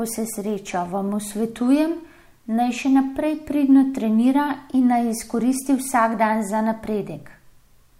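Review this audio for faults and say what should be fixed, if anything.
A steady buzz at 46.9 Hz runs under the speech for the whole clip, and the speech plays at normal speed. This is a block size mismatch (truncated): one stage writes longer blocks than the next stage reads, so the tail of every block is lost and the repeated cut produces a buzz at the block rate. The 46.9 Hz rate fits 1024-sample blocks at 48 kHz. To prevent it, set both stages to the same block size, or buffer between them so no samples are discarded.

From 0.21 s to 7.39 s there are faint, regular ticks roughly every 0.7 s, about ten in all, most noticeable on loud or sustained speech and missing in pauses. These are clock slip clicks, likely caused by two devices running on separate clocks about 30 parts per million apart. Each time that drift adds up to a whole sample, one sample is dropped or repeated, leaving a small step in the waveform. 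To prevent it, lock both devices to a shared clock or put an adaptive sample-rate converter between them.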